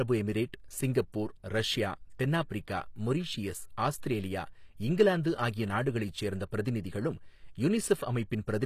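Speech throughout has treble that sounds false: sibilants come out gritty and metallic, with plainly audible coding damage and nothing at all above 14.9 kHz. This is likely HE-AAC compression, at a rate that fits roughly 24 kbps. The codec keeps only the lower spectrum and fills in the top by copying lower bands upward under a coarse envelope. The rebuilt harmonics don't line up with the real ones, and that mismatch gives the s sounds their rough, synthetic edge. At 2.49 s there is a pre-echo, a brief hiss about 14 ms long just before "மொரீசியஸ் ஆஸ்திரேலியா இங்கிலாந்து" that softens the attack. The onset fell late in a transform block, so the quantisation noise sized for the loud part was spread back across the quiet moment before it, smearing noise ahead of the sound.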